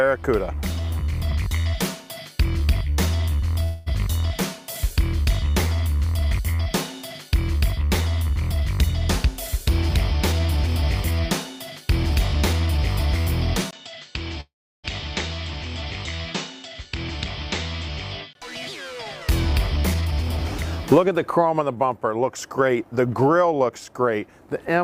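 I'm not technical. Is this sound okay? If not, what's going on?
No. At 3.63 and 14.41 seconds the sound stalls into a fading buzz, the second ending in a brief silence. This is a call audio freeze, likely from delayed network packets.

From 9.27 to 11.21, 11.81 to 12.78, 19.53 to 20.38 and 20.92 to 24.19 seconds, it rushes ahead at unchanged pitch. That's jitter buffer speed-up, trimming tiny slices to catch up.

From 13.71 to 18.35 seconds it turns duller, quieter and noisier after a tiny dropout, likely an input switched to a poorer device.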